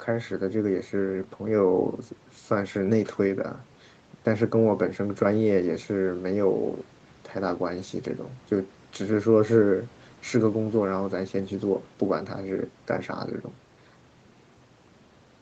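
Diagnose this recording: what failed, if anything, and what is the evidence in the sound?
Nothing failed; no faults present.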